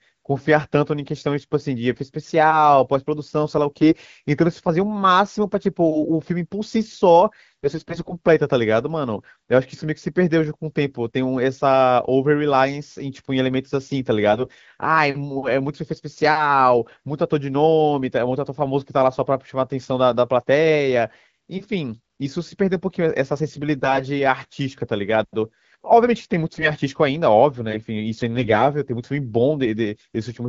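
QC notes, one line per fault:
7.64–8.14 s, 14.32–14.48 s, 23.78–24.02 s, 26.50–26.73 s and 28.35–28.65 s: AMR bit errors. Brief hoarse, scratchy, gargly bursts while pitch and level roughly hold. A few percent of the weakly protected AMR-WB bits arrive flipped, misplacing excitation pulses and skewing fine pitch, gain and spectral values, while the checksum on key bits still passes.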